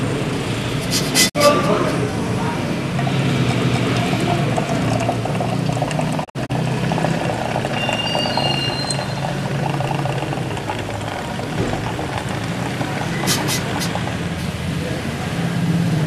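At 1.28 s, a digital broadcast dropout briefly fades the sound to silence. Corrupted frames were muted, losing about 48 ms. At 3.64 s, overlapping chunks replay 250 ms of audio, heard as a stutter. At 6.23 s, another dropout scatters several short holes across 240 ms. At 9.89 s, the stutter repeats, six seconds after the last join.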